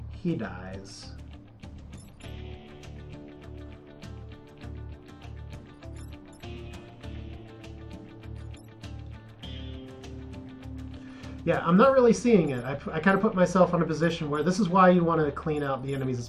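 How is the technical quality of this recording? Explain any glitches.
No technical faults can be heard in this recording, and the signal holds steady throughout without any glitch, dropout or interruption.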